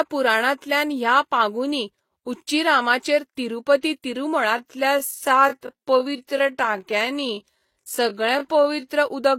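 A speech recording that carries stacked compression damage from start to finish. The top end is cut off at the lowest limit of the chain, a hard ceiling that shows on a spectrogram as a flat empty band across the top. Below it, two different kinds of artefact overlap: a smeared, swirly top end typical of Vorbis, and the patched, synthetic-sounding highs of HE-AAC's band replication, which show as repeated, slightly blocky texture in the upper frequencies. Together they point to transcoding between lossy codecs, likely a low-rate Vorbis encode re-encoded to HE-AAC at a similarly low rate. From 4.55 to 8.87 s there is a time-stretched section. The pace drops abruptly to about 0.7 times normal speed while the pitch stays put, and the speech drags. That points to stretching software that kept the pitch by repeating short slices of audio. On a waveform the syllable envelopes in that span look drawn out. 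On a spectrogram the harmonics stay at the same heights but each sound runs longer.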